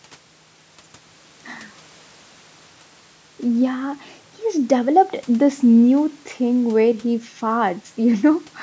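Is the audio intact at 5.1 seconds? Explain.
Yes, the speech at 5.1 s is intact, with nothing disrupting it beyond the ordinary call microphone processing, which trims the lowest bass and leaves nothing above 8 kHz.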